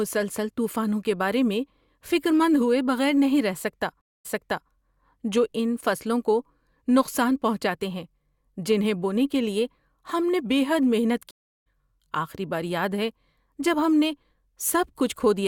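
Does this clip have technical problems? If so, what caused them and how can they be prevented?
Yes. Just after "بغیر نہیں رہ سکتا", from 4.01 to 4.70 s, the speech drops out for 237 ms and then comes back 448 ms earlier than where it stopped, so a short stretch repeats. From 11.31 to 11.66 s, just before "آخری بار یاد ہے", there is a 351 ms gap, and about 0.4 s of speech is skipped. Both are stream reconnects. The connection broke, the player fell silent, and it reopened the stream with a fresh decoder at a different point. In the first case the server resent a backlog, and in the second it had moved on live. A larger receive buffer and a steadier network link, with the player resuming from the exact byte offset, would prevent this.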